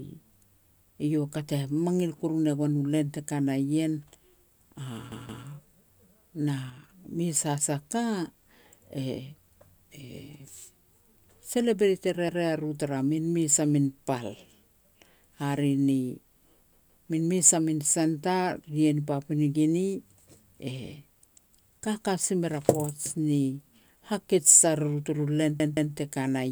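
At 5.12 s a repeated buffer makes the speech stutter: a 0.17 s slice, which fits an 8192-sample buffer, plays twice more through 5.46 s, each join hard. Nothing is skipped; playback simply runs late. On a waveform the same block appears side by side, with a sharp discontinuity at each seam, and the spectrogram shows identical patterns tiled with vertical broadband lines at the joins.

From 6.70 to 6.84 s the level drops abruptly by about 6 dB for 0.14 s, then snaps back. The likely cause is one stereo channel cutting out, leaving only half the mono sum. The waveform envelope halves in a short, steep-edged notch, while the spectrogram dims uniformly across all frequencies, with no change to its shape.

The same stutter recurs at 12.29 s, repeating once until 12.46 s, then at 16.73 s, twice through 17.07 s. It happens again at 25.60 s, just after "turu len", twice through 25.94 s.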